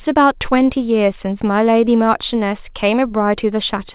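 A speech clip with no technical faults to point to. It has come through a working call path whose sound fits a G.711 mu-law narrowband codec, so there is nothing above 4 kHz and it carries that codec's ordinary coding noise.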